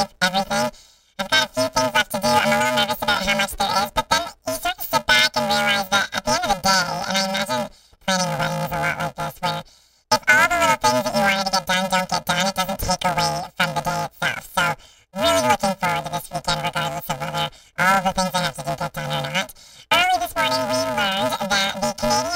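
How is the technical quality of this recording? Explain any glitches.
The recording has one serious problem, and it runs the whole way through: it's a case of planar audio read as interleaved. The data arrives in blocks of 128 samples per channel, about 2.67 ms each, with all the left samples stored first and then all the right. The player treats that as alternating left/right pairs, so each block's left half and right half get played back to back at double speed. With blocks this short, you don't hear an octave jump. Instead the speech picks up a robotic buzz at the block rate of 375 Hz, overlaid on everything from start to finish.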